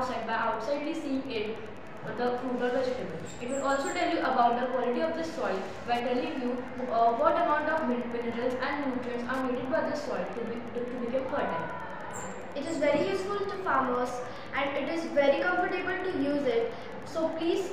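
A steady ticking runs under the sound for the whole clip, about ten clicks a second, sitting roughly 35 dB below the main signal. That's Wi-Fi interference: a nearby radio's beacon, sent every 102.4 ms, being rectified by the audio circuitry.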